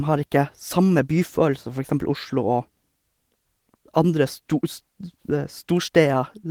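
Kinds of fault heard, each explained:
Nothing here counts as a fault, since the Opus voice compression at 24 kbps in hybrid mode is simply doing its normal job, keeping the band open up to about 20 kHz.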